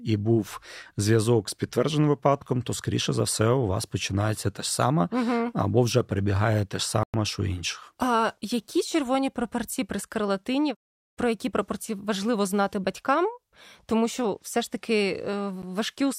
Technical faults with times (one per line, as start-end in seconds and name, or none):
7.03-7.14 Bluetooth stall
15.62 Bluetooth stall